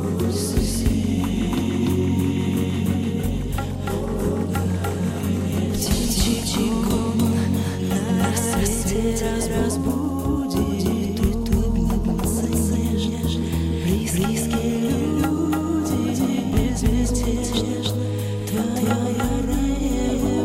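A second capture path or an edit likely holding two out-of-step copies produces a doubled audio track throughout: an equally loud full-band copy trails by roughly a third of a second, dry and uncoloured.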